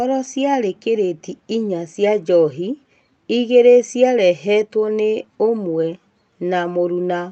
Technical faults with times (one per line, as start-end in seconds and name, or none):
none